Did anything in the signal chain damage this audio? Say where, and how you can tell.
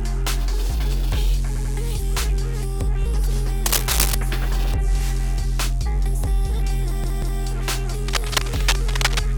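Yes. At 1.56 to 1.74 s and again at 7.04 to 7.41 s the sound stutters, briefly replaying the same snippet. These are repeated frames, a fault in the codec or storage stage. In the first case a 92.9 ms block is played twice more, which fits a single compressed frame, and adds 185.8 ms. In the second a 185.8 ms block, which points to two frames, repeats twice and adds 371.5 ms. The decoder was handed the same frames again, so the clip runs longer than the original.

From 3.66 to 4.15 s, and from 8.08 to 9.23 s, a dense, uneven scratching rustle sits over the sound. In the first burst it is roughly as loud as the signal. In the second it is about 5 dB below. This is cable scratch noise in the analogue wiring. It is likely caused by a worn cable, connector or control being moved, so that the contact resistance jumped about rapidly and added those ragged bursts of noise.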